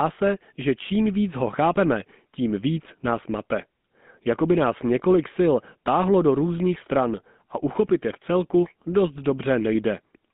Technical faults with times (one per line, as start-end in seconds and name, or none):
0.00-10.34 GSM full-rate codec